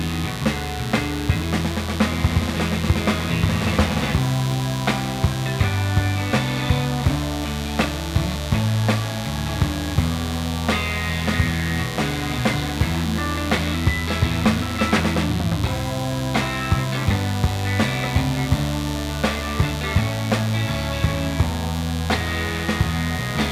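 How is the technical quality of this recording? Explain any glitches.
The recording carries one fault from start to finish: mains buzz. Switching spikes leak in twice per 50 Hz cycle, spreading harmonics into the kilohertz range, leaving a steady, raspy buzz roughly 15 dB below the sound.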